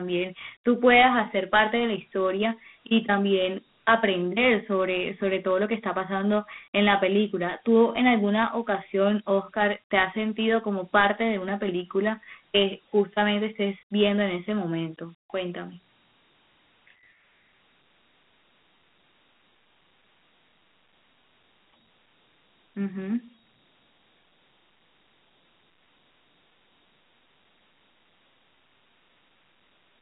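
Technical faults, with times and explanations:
Throughout, Dialogic VOX ADPCM: speech squeezed into 150 Hz to 3.5 kHz, nothing past 3.8 kHz, gritty hiss trailing it, which fits coarse 4-bit coding at 32 kbps.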